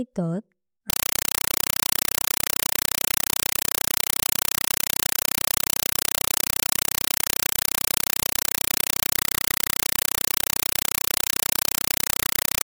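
A compressed stream played as audio takes over this speech clip from 0.90 s to the end: an undecoded AC-3 bitstream is read as PCM, giving 5.33 ms noise bursts at 31.25 per second with silent padding between, which fits a 256 kbps stream, heard as loud chattering static.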